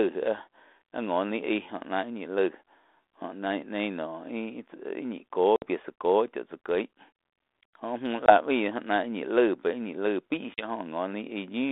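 At 5.56 s, 8.26 s and 10.54 s the speech drops into hard-edged silence for about 60, 20 and 40 ms respectively. This is packet loss on an ADPCM call: the missing packets are filled with silence, and the decoder's adaptive predictor and step size lose track of the sender's. When audio resumes, it comes back slightly distorted and settles over the following tens of milliseconds. The narrow telephone band, with its light coding grain, fits 32 kbit/s G.726.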